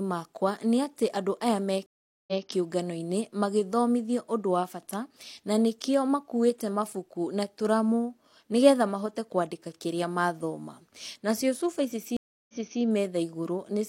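At 1.86 to 2.46 s and again at 12.17 to 12.81 s, the speech hits a stream reconnect. The connection drops, leaving 413 ms then 319 ms of silence. Playback restarts on a fresh decoder and repeats material from 186 ms and 325 ms earlier, as the server resends a burst.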